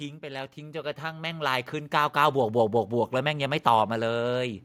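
From 0.2 s to 3.6 s there is automatic gain rising. The gain control judged the input too quiet and lifted it by about 12 dB, so speech and background noise swell together. The waveform envelope widens steadily, and the spectrogram brightens evenly across all frequencies.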